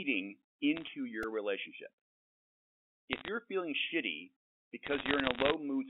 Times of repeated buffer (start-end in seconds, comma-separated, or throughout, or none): 1.23